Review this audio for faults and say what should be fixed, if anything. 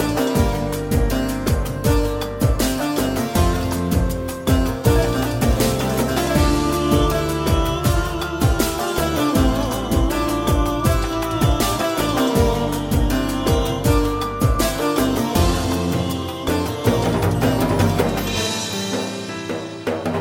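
Nothing here needs fixing; no faults turn up anywhere in the recording, so it can be left as it is.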